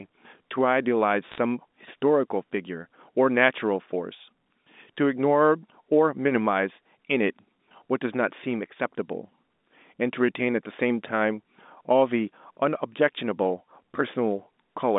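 Bit errors on a digital phone line show up between 1.28 and 1.38 s of this speech recording as a brief burst of sharp ticks and crackle. Scattered bits in the 8-bit logarithmic G.711 samples have flipped, at a rate well under one percent. Where a sign or high-order bit is hit, that single sample jumps far from its true value and clicks. The speech underneath is unchanged, and it is band-limited to roughly 200 Hz to 3.7 kHz as telephone coding should be.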